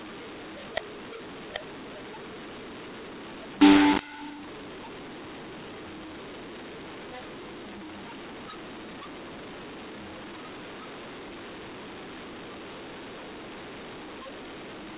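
From start to finish the speech has a mu-law and A-law mix-up, sitting under the 4 kHz ceiling of 8 kHz G.711 telephone coding. It was encoded as A-law but decoded as mu-law, so levels get scrambled, the quietest samples jump well above silence, the voice turns harsh and gritty, and the pauses fill with hiss.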